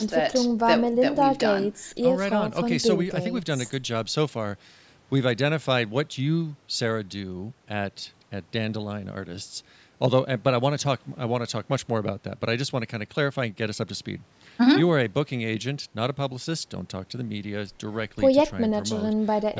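No technical faults occur at any point in this speech recording.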